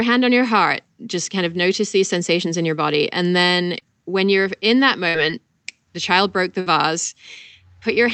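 Right after "your body and then", at 3.79 to 3.83 s, there's a short concealed packet loss. A sliver of the call didn't reach the decoder in time, so the receiver papered over it by carrying the preceding sound forward for roughly 13 ms, then blending back in. About 20 ms of real audio is gone. You hear it as a quick smear just before "when you're in that". It's tiny.

Then there are two bursts of packet loss, each with about 60 ms of audio missing. The first comes right after "when you're in that", at 5.09 to 5.16 s. The second follows "the child broke the", at 6.60 to 6.68 s. In both, a run of packets was lost or arrived too late, and the receiver stretched the last sound over roughly 55 ms while fading it down. Depending on what was playing, that comes across as a held buzz or a dying hiss, and then the sound picks up further along with the in-between chunk simply gone. All of this sits on an Opus call path whose top end stops around 8 kHz, at a bitrate of 40 kbps.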